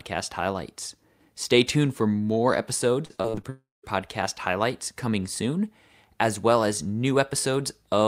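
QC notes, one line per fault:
3.05–3.45 s, repeated packet loss (robotic sound): after "tuned for more", five short gaps, longest 43 ms, are patched by extending prior sound, leaving choppy, robotic audio.
3.49–3.85 s, long network dropout: likely a stall in packet arrival. About 340 ms is lost, heard as a fading continuation and then 190 ms of silence.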